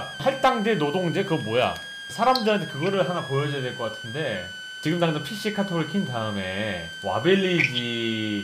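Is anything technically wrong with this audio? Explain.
Yes. A switching supply whistle runs through the whole clip. A switching power supply is running in an audible burst mode or beating with another one, producing a high tone that wanders between about 1.5 and 1.66 kHz, sitting only around 15 dB below the wanted sound.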